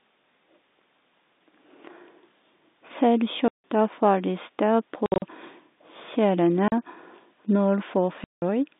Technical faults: packet loss filled with silence

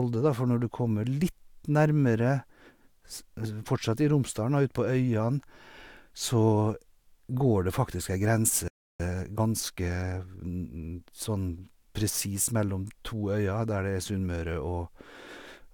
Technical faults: playback stall; time-compressed catch-up

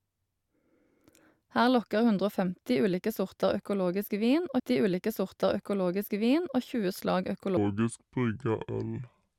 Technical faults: stream segment repeated; section at the wrong speed

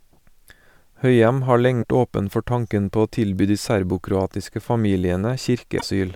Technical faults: damaged data in a compressed stream

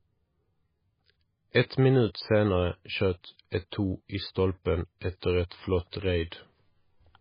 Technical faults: MP3 compression

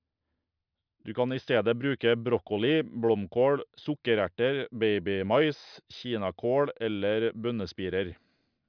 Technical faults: none

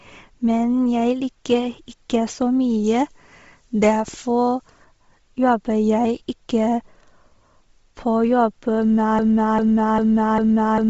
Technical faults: Bluetooth LC3 compression; pre-emphasis left on; broken-record loop

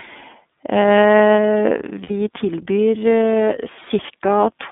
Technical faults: iLBC codec; lost iLBC frames

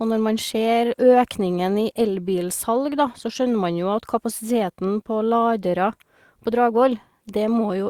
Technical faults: none

